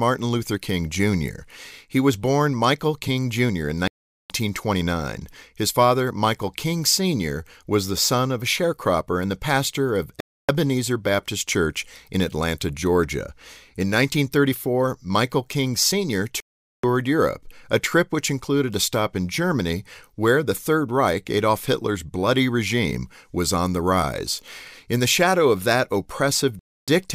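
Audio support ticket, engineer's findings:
Speech drops to dead silence four times, then carries on: 3.88 to 4.30 s (424 ms), 10.20 to 10.49 s (284 ms), 16.40 to 16.84 s (432 ms), 26.59 to 26.88 s (284 ms). Looks like a Bluetooth stall, likely radio interference delaying packets. Headphone buffer runs dry, playback halts until the retransmits land, then resumes. Gaps come in two sizes, roughly 280 ms and 430 ms.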